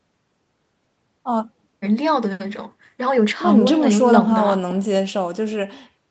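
No audible technical faults anywhere in this speech recording.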